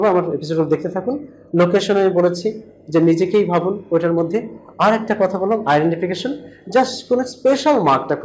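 No technical faults are audible.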